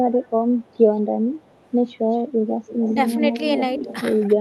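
Echo leak appears at 0.12–0.3 s, 0.6–0.78 s, 1.34–1.7 s, 2.11–2.22 s, 2.61–3.13 s, 3.39–3.43 s and 3.76–3.96 s: a delayed copy of the speech trailing the original. This is likely residual echo that a far-end echo canceller failed to remove from a loudspeaker's pickup. The lag is 190 ms in the first two scraps and 224 ms afterwards. The first scrap is well below the speech and the next three are faint, while the last three return much louder, about 10 dB under the speech.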